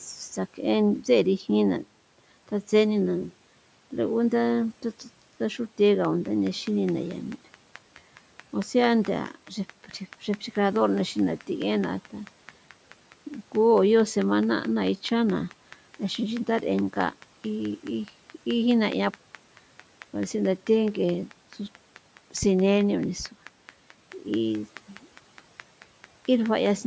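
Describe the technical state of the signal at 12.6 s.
At 12.6 s you're in the middle of a train of clicks running from 6.05 to 26.67 s, about 100 of them. They're a steady 4.66 per second and peak roughly 15 dB above the speech, ticking right through the pauses too. Likely interference or a faulty connection or power supply.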